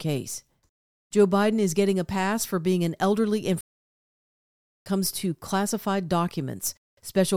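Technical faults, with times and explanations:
3.61 to 4.86 s, playback stall: the speech cuts out mid-flow and the output sits completely silent for about 1.25 s before the talking picks up again. That kind of dead gap is what you get when the player likely ran dry of buffered data or had its audio thread held up, so it simply had nothing to send out until it caught up and carried on.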